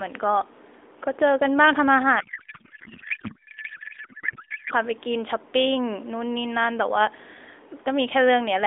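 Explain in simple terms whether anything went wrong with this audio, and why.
Something broke from about 2.2 to 4.7 s: the speech turns into garbled, warbly noise that barely follows it. That's a codec payload misread. The receiver unpacked the phone codec's data in the wrong layout, so every field landed in the wrong place.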